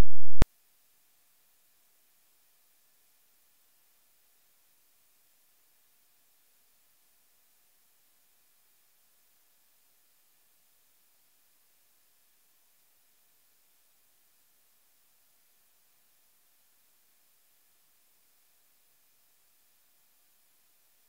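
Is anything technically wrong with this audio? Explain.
No, no technical faults heard.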